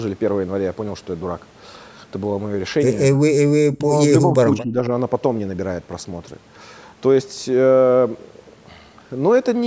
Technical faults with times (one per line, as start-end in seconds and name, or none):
3.08-4.90 speech suppressed in double talk
4.59-4.63 echo leak